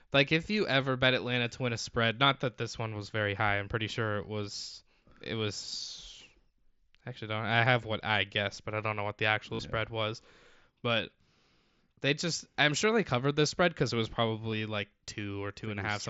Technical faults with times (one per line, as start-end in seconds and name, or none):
9.55-9.59 concealed Bluetooth headset packet loss
14.52 concealed Bluetooth headset packet loss